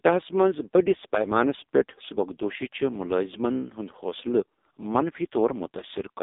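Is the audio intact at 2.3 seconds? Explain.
No. The AMR narrowband mobile codec runs throughout, including 2.3 s. Nothing passes above 3.8 kHz. The heavy buzzy, synthetic damage fits a very low 5.15 kbps mode.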